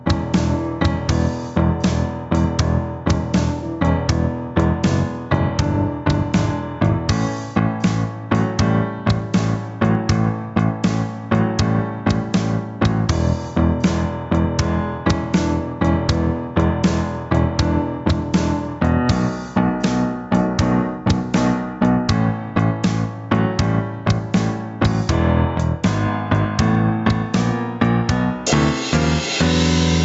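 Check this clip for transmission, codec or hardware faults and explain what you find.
One fault runs through the whole clip, heard over a call path whose content stops near 8 kHz, consistent with Opus at a moderate bitrate.

Gain pumping, throughout: the input gain was likely set far too high, so a fast limiter or compressor pulls the level down on every loud sound, swinging by roughly 15 dB. Loud and soft parts end up closer in level, leaving the sound squashed.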